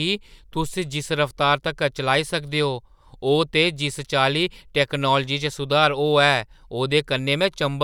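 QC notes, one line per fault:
Nothing stood out on listening to the speech in this clip.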